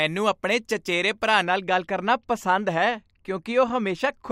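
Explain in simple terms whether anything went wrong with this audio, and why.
Yes: from 1.45 s, after "ਆਪਣੇ ਚਚੇਰੇ ਭਰਾ", to the end, de-emphasis applied wrongly strips away treble, so the speech turns dull and muffled.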